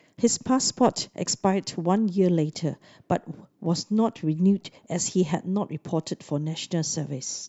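Nothing goes wrong anywhere in this bit of speech, so there's no technical fault to point to.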